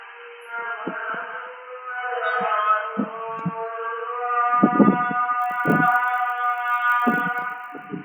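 From 5.36 s to 7.88 s a resampler restarted on every block produces a steady 50 Hz buzz under the sound, which fits 20 ms blocks converted separately, likely in a 24 kHz to 48 kHz upsampling stage. Each block edge lacks its true neighbouring samples, leaving a small error that repeats at the block rate.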